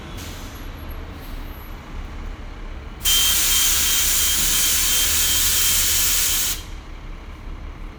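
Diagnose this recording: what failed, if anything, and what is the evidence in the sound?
Nothing stood out on listening to the recording that would point to a failure at any stage of the chain.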